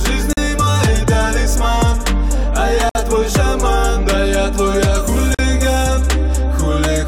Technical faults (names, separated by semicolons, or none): gap at a join of encoded pieces